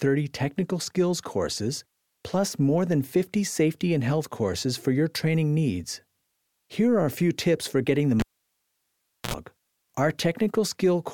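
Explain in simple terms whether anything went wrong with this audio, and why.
Around 8.20 s a cable was pulled and plugged in: a pop, about a second of near silence, a short 60 Hz mains buzz, then another pop at 9.34 s.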